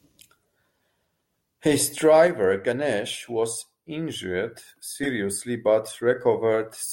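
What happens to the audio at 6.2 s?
Nothing goes wrong at 6.2 s; the speech carries on intact through that moment.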